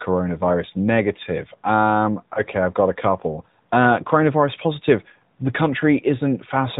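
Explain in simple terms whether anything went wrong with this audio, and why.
Yes, two things went wrong. First, the call passed through the AMR narrowband mobile codec, which drops everything above 4 kHz and rebuilds speech from a simplified model of the throat and mouth. That leaves this speech audibly muffled, buzzy and artificial throughout.

Second, there are lost AMR speech frames. A radio error spoiled a packet of speech, so the decoder guessed by reusing its last good settings at lower volume. From 2.34 to 2.43 seconds you hear a short dip or warble, consistent with a single missing 20 ms frame.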